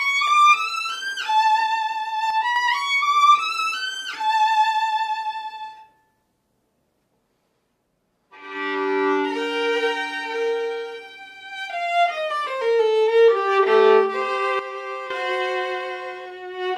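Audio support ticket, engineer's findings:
Level drops abruptly, sound and noise floor together, at 2.30–2.56 s (about 6 dB) and 14.59–15.10 s (about 10 dB). Sudden gain jump, likely an unramped digital gain or bit-shift change.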